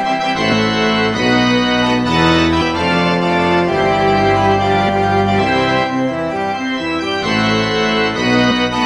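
Compressed frames skipped at 0.51–0.53 s, 2.60 s, 4.88 s and 8.50–8.52 s: at each point the audio jumps forward, losing roughly 100 to 200 ms, which fits runs of about five to ten whole 23.2 ms frames that were missing or rejected by the decoder as damaged.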